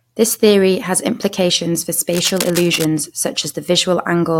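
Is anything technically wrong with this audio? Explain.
Yes. From 2.10 to 2.85 s, just after "theory has implications for", there is cable scratch noise: a rough, crackling rustle lying over the speech at about 10 dB below it. The likely cause is a worn cable or connector being moved, its contact resistance flickering and injecting irregular bursts of noise. On a waveform it shows as jagged, uneven spikes riding on the speech. A spectrogram shows it as ragged broadband vertical streaks across that span.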